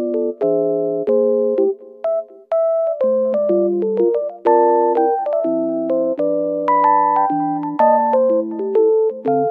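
Nothing technically wrong can be heard anywhere in this audio. The level, timing and continuity hold steady throughout, with no audible disturbance at any point.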